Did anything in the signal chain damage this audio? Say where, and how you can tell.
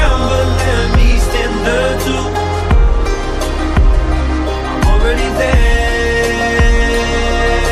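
No, nothing along the way seems to have harmed this one, since there's nothing in it that gives away trouble at any stage from the wiring through to playback.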